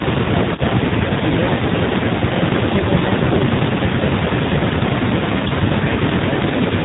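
Throughout, the speech has been squeezed through the AMR narrowband mobile codec at a low bitrate. The sound points to AMR-NB around 7.4 kbps. The codec samples at 8 kHz and rebuilds each 20 ms frame from a vocal-tract model driven by a handful of pulses, so nothing above 4 kHz survives. The damage is plainly audible: a muffled, telephone-band voice with a buzzy, synthetic edge.

From 5.40 to 5.49 s, AMR bit errors strike across a few consecutive 20 ms frames. Several percent of the less protected bits arrived flipped while the frames' core checksum still passed, so the decoder accepted them. The excitation pulses land in the wrong places and the finer pitch, gain and spectral values drift. For that tenth of a second the voice keeps roughly its pitch and level but turns hoarse, scratchy and gargly before recovering.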